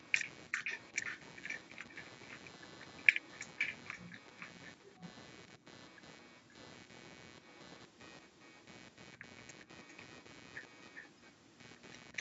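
Computer activity noise, a buzz pulsing around 150 Hz and about 10 dB below the speech, runs throughout. The processor or graphics load disturbs the shared audio ground, which shows as evenly spaced vertical striations on the spectrogram. An echo leak appears at 0.01–0.31, 0.64–1.32, 1.48–6.72, 7.41–8.64, 9.6–10.25 and 10.49–11.32 s. A delayed copy of the speech trails by about 0.36, 0.52 and then 0.40 s, at levels from equal to the speech down to faint. The likely cause is a loudspeaker echo the far side's canceller missed, and it shows as ghosted, time-shifted repeats of the speech patterns.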